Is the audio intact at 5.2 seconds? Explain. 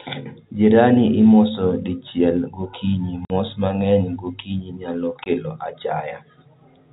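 No. Just after "gokinyi nyalo", from 5.24 to 5.26 s, packet loss filled with silence cuts a 20 ms hole: two lost packets, which fits 10 ms packets, replaced by silence. It has hard edges, unlike concealment, which would smear or repeat sound across the gap.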